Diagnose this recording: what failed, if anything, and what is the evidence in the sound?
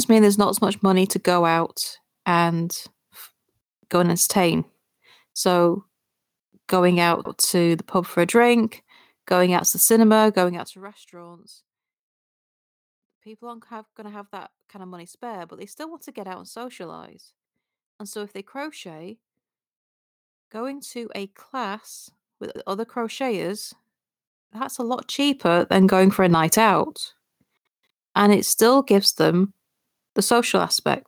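Gain pumping runs through the whole speech clip, at the capture and call-processing stage. The gain swings by roughly 15 dB, and the voice sounds squashed and even in level. The likely cause is input gain set far too high, with a fast limiter clamping it on every peak. Unlike a deliberate fader move, the level follows each loud syllable rather than changing slowly.

Overlapping chunks show up at the buffer or chunked-processing stage. There are short stutters at 2.15 s after "money to go out", at 7.25 s, at 17.45 s after "get out and socialize", at 22.55 s between "to a class with" and "other crocheters", and at 27.65 s. Each one replays about 100 ms of audio. The roughly 5 s spacing points to a 5-second chunk where each chunk restarts before the previous one ended. The audio is doubled, not missing, which separates this from a dropout.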